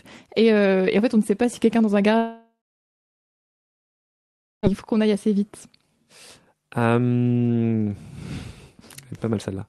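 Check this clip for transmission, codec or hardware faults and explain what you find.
One fault stands out in this speech clip: a long network dropout. From 2.17 to 4.66 s, right after "si quelqu'un dans un", audio likely stopped arriving. The receiver stretches the last sound into a fading buzz, then leaves about 2.1 s of near silence. Speech resumes at "faut qu'on aille assez", with 2.46 s of audio lost. Throughout, the call codec's usual coding noise and a top end near 12 kHz remain audible.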